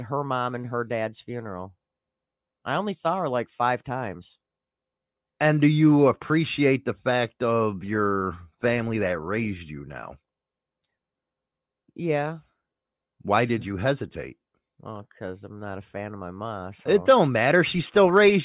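Nothing stood out as a technical fault on listening to this speech recording.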